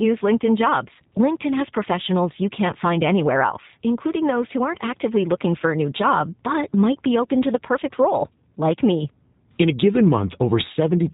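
From start to finish the speech carries the signature of the G.729 codec, with damage that is plainly audible. Everything above 4 kHz is missing, so sibilants lose their edge and the sound is confined to a narrow telephone band. The codec rebuilds each 10 ms frame from a vocal tract model, a pitch predictor and a handful of pulses, which leaves the voice slightly rough and synthetic. This fits an 8 kbit/s G.729A stream.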